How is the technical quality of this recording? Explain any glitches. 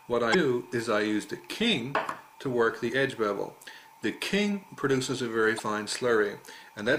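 There are three short glitches, all the same kind: damaged data in a compressed stream. They hit at 0.30 to 0.35 s, 2.86 to 2.91 s and 5.55 to 5.60 s, each lasting about 45 ms. At those spots a stretch of the encoded data is corrupt, so the decoder misreads the frames, loses sync and has to hunt for the next valid frame header. What you hear is a brief chirp or squawky blip breaking into the audio.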